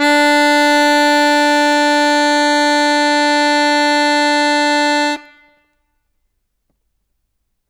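A stage in the signal chain was fed about 3 dB more level than it could pass, so throughout the music its loudest peaks are sliced flat. This is hard clipping, and since well under one percent of the samples run past the limit, only the tallest transients lose their tops. Those squared-off peaks generate harmonics high in the spectrum, heard as brief crackle and grit riding the loudest moments rather than a constant fuzz.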